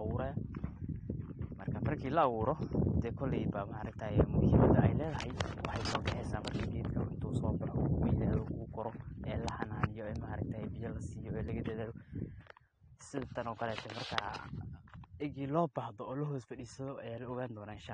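From start to finish the speech sounds dull and smeared, with a watery, fizzy edge on sibilants: likely AAC compression at a low bitrate, fitting around 32 kbps. A spectrogram shows a hard ceiling at 9.7 kHz and patchy, blotchy high bands.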